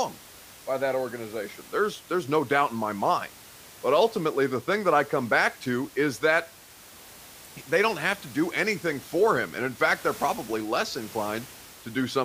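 No technical faults are audible.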